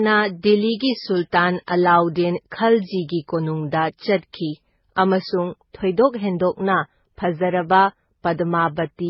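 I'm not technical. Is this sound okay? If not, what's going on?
No. The whole recording sounds thin and smeared, with the speech lacking crispness because nothing above 5.6 kHz is present. The likely cause is transcoding between lossy codecs: the speech was squeezed by one compression format and then again by another, and each pass left its own damage.

From 5.30 s to the end, the speech turns noticeably duller and more muffled, as if heard through a cloth. This is de-emphasis applied wrongly: a treble cut meant to undo an earlier boost was applied where no boost existed, or was applied twice, so the higher frequencies taper away.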